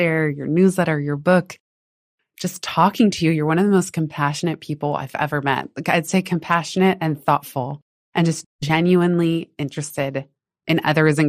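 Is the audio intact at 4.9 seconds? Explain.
No. At 4.9 seconds the speech carries MP2 compression damage, which runs through the whole clip. The likely cause is an MPEG Layer II encoder starved of bits, consistent with a rate around 80 kbps. It divides the signal into 32 sub-bands and shuts off upper bands it can't afford, while coarsely quantising the rest. That leaves the speech plainly dull, with top-end detail flickering in and out and a gurgling, granular roughness.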